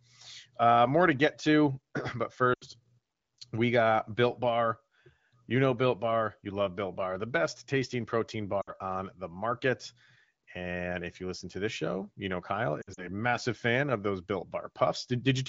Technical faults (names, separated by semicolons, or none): lost AMR speech frames